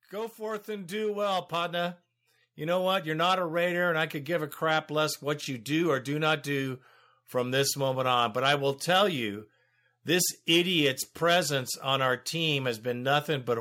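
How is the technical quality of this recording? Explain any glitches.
The recording has one audible fault: automatic gain rising at the start. From 0.1 s to 3.64 s, the level climbs steadily by about 10 dB, ending just before "and I could give". The automatic gain control judged the incoming signal too quiet. It then raised its gain step by step rather than all at once. Because the gain applies to everything, the speech and the background noise swell together. The opening therefore sounds faint, then gradually louder.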